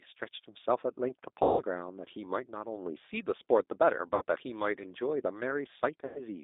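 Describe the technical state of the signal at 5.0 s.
At 5.0 s the speech carries G.729 codec damage, which runs through the whole clip rather than appearing at that moment. The codec rebuilds each 10 ms frame from a vocal-tract filter, a pitch predictor and a few sparse pulses, so the sound at 5.0 s is plainly rough and synthetic, with the buzzy texture of a low-rate model fitting an 8 kbit/s stream. The line band runs from about 250 Hz to 3.7 kHz, which makes the sound thin and muffled.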